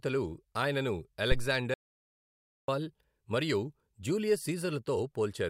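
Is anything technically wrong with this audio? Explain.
Yes, there are two faults in this speech recording.

From 1.32 to 1.51 s there is a phantom power thump. Phantom power, or another supply, was switched on or off on a live input, and the voltage step passed through the input's coupling capacitors into the signal path. It is heard as a deep, low-frequency thud that dies away quickly, with a decay of about 44 ms, so the whole event is over in under a fifth of a second.

From 1.74 to 2.68 s the audio drops out to silence, losing about 940 ms. The sound stops abruptly and resumes just as abruptly, and the gap is silent with no room tone underneath. The likely cause is a lost input, such as a disconnected device, a failed link or a stray mute, while the recorder kept writing silence. Whatever was spoken in that stretch is not recoverable.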